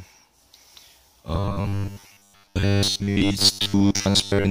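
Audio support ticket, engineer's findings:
Rigid metallic buzz at 100 Hz from 1.35 s to end; robotic sound from repeated short buffers. Likely starved playback repeating ~10 ms chunks, most of the audio replaced by repeats.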